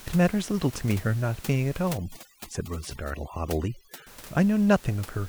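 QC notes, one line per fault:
1.98–4.07 s, overdone noise removal: across this stretch the background drops and breaks up into twinkling, chirpy specks. A noise reduction stage is working far too hard here, pulling individual frequency bands down or off whenever they come close to its noise estimate; the quieter parts of the speech sit near that level, so they are stripped away along with the room noise, which elsewhere sits about 20 dB below the speech.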